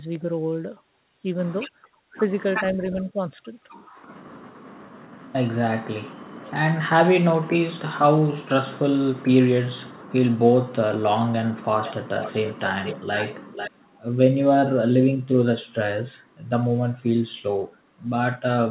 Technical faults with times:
3.13-3.19 speech suppressed in double talk
11.84-12.99 echo leak
13.52-13.71 echo leak

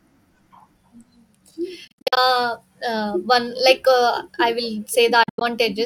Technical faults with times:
1.87-2.17 Bluetooth dropout
5.23-5.42 Bluetooth dropout

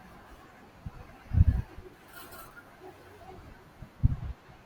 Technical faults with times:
2.31 compressed frames skipped
4.11 compressed frames skipped

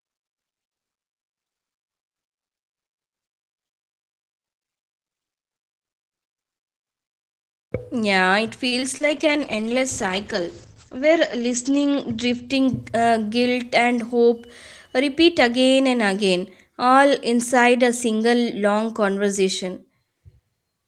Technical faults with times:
8.67-8.74 short stall from a late packet
8.80-9.02 short concealed packet loss
9.02-13.13 call bitrate drop
12.68-13.04 jitter buffer speed-up

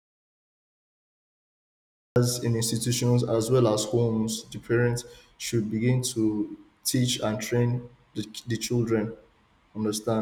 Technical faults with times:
0.00-2.16 audio dropout to silence

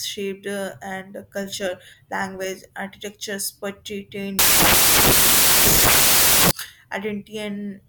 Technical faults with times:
4.39-6.51 samples built from the wrong bytes

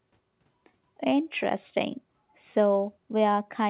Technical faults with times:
none

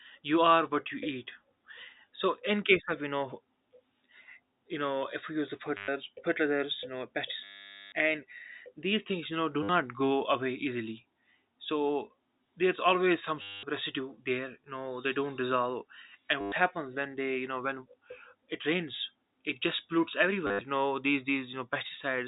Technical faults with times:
5.77-5.88 packet loss with last packet repeated
7.44-7.92 packet loss with last packet repeated
9.63-9.69 packet loss with last packet repeated
13.42-13.63 packet loss with last packet repeated
16.41-16.52 packet loss with last packet repeated
20.47-20.61 packet loss with last packet repeated

